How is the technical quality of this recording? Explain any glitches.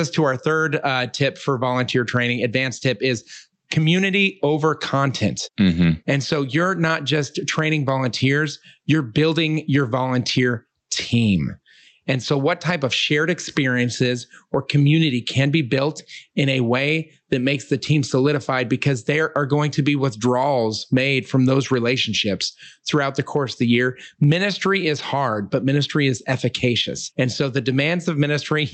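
The main problem is gain pumping, and it runs through the whole recording. The gain swings around 15 dB. The likely cause is a mic gain set far too hot, with a fast limiter or compressor grabbing every loud syllable and letting go in the gaps. Loud and quiet parts sit unnaturally close together, so the speech sounds squashed. The top end stops around 8 kHz, which fits a roughly 40 kbps Opus call path.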